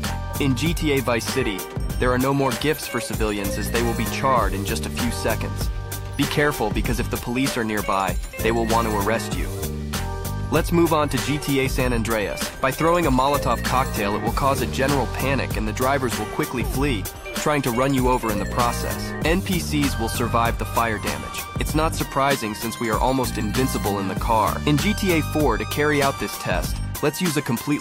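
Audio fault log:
1.20–26.84 s clock slip clicks: likely unsynchronised clocks about 20 ppm apart, slipping one sample roughly once a second, heard as faint regular ticks.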